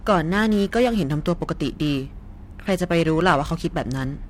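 Periodic clock jitter runs throughout the speech, with the converter clock wobbling at around 1.5 kHz and spreading sidebands that give a rough, metallic edge.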